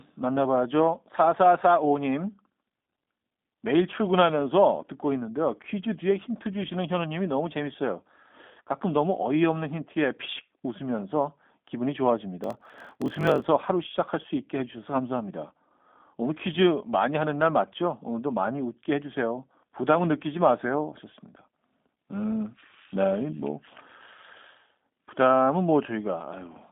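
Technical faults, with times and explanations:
Throughout, G.729 codec: the speech passed through an 8 kbit/s G.729A link that rebuilds each 10 ms frame from a vocal tract model, pitch prediction and a few pulses. The line band of 200 Hz to 3.7 kHz leaves nothing above 3.7 kHz, so the speech sounds muffled, rough and plainly synthetic.
12.42 to 13.46 s, block size mismatch (padded): one stage delivered short blocks to a stage reading 1024 samples, and the shortfall in each block was zero-filled. The repeated silent gaps make a buzz near 47 Hz, and the speech slows to about 0.94 times its speed while keeping its timbre.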